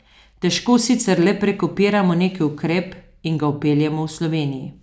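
No dropouts, clicks, distortion or timing breaks register anywhere in the recording; nothing to report.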